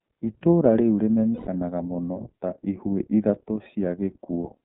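From start to finish the speech passes through the iLBC codec, a narrowband VoIP coder. The band runs from about 150 Hz to 3.6 kHz, so the top end is gone. The voice has the plainly audible rough, slightly synthetic grain of excitation coded frame by frame, which fits 30 ms frames at the 13.33 kbps rate. A plain telephone band-limit would sound dull but clean; this has coding grit as well.

At 1.32 s the decoder hits lost iLBC frames and fills the 150 ms gap, to 1.47 s, which fits five missing 30 ms frames. It repeats the last pitch cycle blended with noise, so the gap sounds like a held, faintly buzzy vowel rather than silence or a stutter. Unlike concealment in codecs that carry state between frames, the voice is back to normal almost immediately after the gap, with no smeared recovery.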